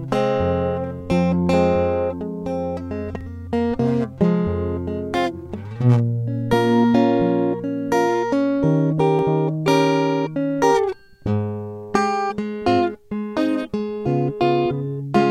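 A music clip with two brief skips at 3.21 s and 9.19 s, each caused by overlap between stream segments. At both points about 39 ms of sound is dropped where adjacent segments' time stamps overlap, so the waveform jumps abruptly and a tiny skip is heard. The roughly 6 s spacing matches the segment length. A spectrogram would show a thin vertical broadband line at each seam, and the waveform a sudden discontinuity.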